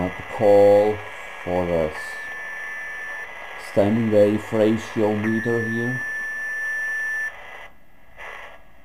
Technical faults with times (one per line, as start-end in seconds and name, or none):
0.00-8.84 crude rate conversion